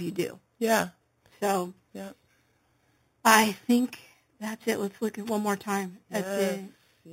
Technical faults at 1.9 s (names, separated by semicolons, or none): imaging from sample-and-hold upsampling